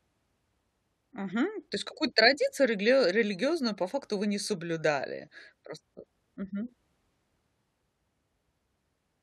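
Recorded speech with no audible technical faults anywhere in it.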